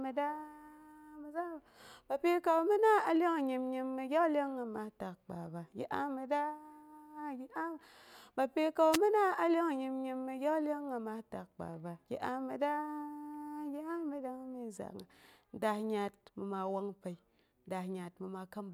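The radio link from an analogue FM wireless microphone fades briefly as reflected signals cancel, causing a wireless microphone noise hit in this speech clip from 8.92 to 8.98 s: receiver noise surges for about 60 ms, heard as a short swish of static over the voice.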